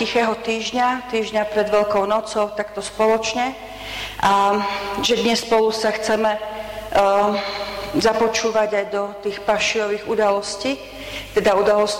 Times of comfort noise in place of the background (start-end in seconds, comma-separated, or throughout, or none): none